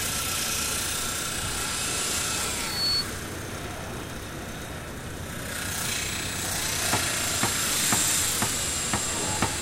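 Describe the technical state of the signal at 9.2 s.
At 9.2 s the audio is intact, with no fault to be heard at that moment.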